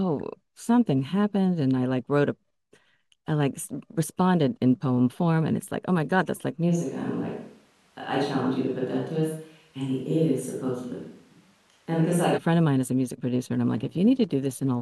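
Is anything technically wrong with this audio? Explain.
Yes. From 6.71 s to 12.36 s the speech turns roomy and hollow at once, with thinner bass, then snaps back just as abruptly. This points to a switch to a distant microphone, likely because the close mic's signal dropped out and a farther one, such as a camera mic, was used instead. Loudness stays about the same, but room noise rises to roughly 35 dB below the speech. Added reverb alone wouldn't bring that noise rise or the sudden switch in both directions.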